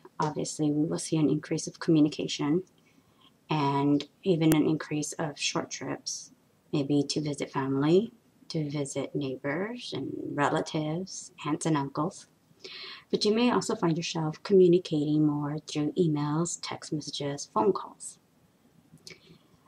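At 4.52 s there's a single sharp, loud click, which is a file header played as audio. What's going on is that the bytes of a WAV header got read as if they were sample data, most likely because a second piece of audio was joined on or streamed in at that point without its header being stripped. Those few dozen bytes turn into a brief burst of garbage values, so you get a hard snap that has nothing to do with the surrounding sound.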